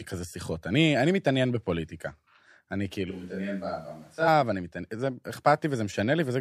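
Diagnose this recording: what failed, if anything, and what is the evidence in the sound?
A switch to a distant microphone is heard from 3.11 to 4.27 s, at the analogue capture stage: the speech turns abruptly roomy and thin, drops about 5 dB, and room noise rises to roughly 35 dB below it. The close microphone likely dropped out, leaving a farther pickup.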